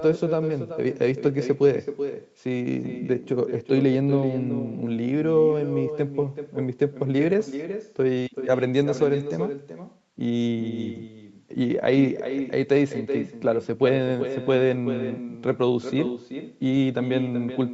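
From start to finish the far end plays the call over a loudspeaker, and its microphone feeds that sound back with no echo canceller to remove it. Every phrase of speech therefore returns after the network round trip, around 400 ms later and about 10 dB quieter: a thin shadow trailing each word, on top of call audio that stops at 8 kHz.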